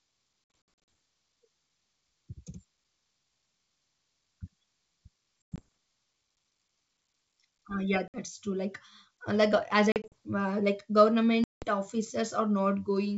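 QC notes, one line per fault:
0.44–0.88 s, packet loss on an ADPCM call: around ten packets, 240 ms, vanish as scattered hard silences, longest 60 ms; each return comes back slightly distorted as the decoder's predictor resyncs.
5.54–5.62 s, packet loss on an ADPCM call: 120 ms lost, mostly one 100 ms hole; unlike a plain dropout, speech resumes slightly distorted before settling.
8.08–8.18 s, packet loss on an ADPCM call: 60 ms lost as silence; the decoder's step size no longer matches the sender's, so the restart briefly distorts.
9.92–10.13 s, packet loss on an ADPCM call: 100 ms lost in short gaps up to 40 ms across 200 ms, giving a stuttering chop with slight distortion after each.
11.44–11.65 s, packet loss on an ADPCM call: about ten packets, 180 ms, go silent, just ahead of a slightly distorted return lasting some tens of milliseconds, the ADPCM state-mismatch signature.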